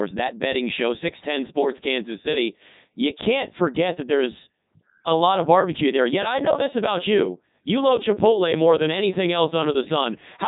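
From start to finish, the speech has passed through the Codec 2 vocoder at 3.2 kbit/s. The damage is heavy. Only pitch, voicing, energy and a coarse spectral envelope survive. The decoder rebuilds each sound from sine waves, so the original waveform is gone. The result is robotic and buzzy. Nothing is present above 3.8 kHz, which leaves the sound dull and boxed in.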